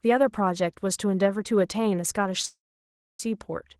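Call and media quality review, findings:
Call audio freeze, 2.45–3.20 s: speech stops, a brief fading buzz then about 0.6 s of silence, and speech resumes where it left off with nothing lost. Likely jitter buffer underrun from delayed packets, adding a 0.74 s gap.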